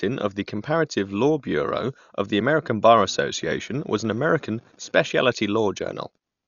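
Speech runs through heavy coding damage from start to finish, most likely Dolby Digital compression at a starved rate, which fits roughly 48 kbps. Nothing survives above 7 kHz, so the sound is dull, and the bands the encoder left without mantissa bits come back as dither noise, giving a rough, fluttering hiss around voiced tones. A plain low-pass filter would dull the sound equally but leave it clean, without that noise.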